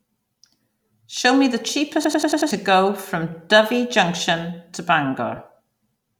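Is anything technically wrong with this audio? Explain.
Yes, there are two faults. From 2.04 to 2.51 s there is a system hang loop. A frozen driver replayed one 93 ms buffer five times, at 10.8 Hz. This fits a 4096-sample buffer. It sounds like a machine-gun stutter, and about half a second of speech is lost. From 5.36 to 5.38 s there are lost LE Audio frames. About 20 ms went missing, which fits two lost frames. The LC3 decoder filled the gap with the previous spectrum using random signs, so that moment sounds like a brief noisy smear.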